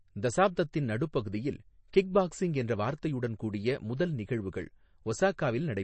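From start to finish the speech carries plainly audible damage, likely from MP3 compression at a low bitrate, consistent with something around 32 kbps. Nothing is present above about 8.3 kHz, where the encoder has cut the treble to save bits, so s sounds lose their edge. Weak frequency lines switch on and off between frames, giving a watery, swirling texture with metallic chirps on sibilants and smeared consonant attacks.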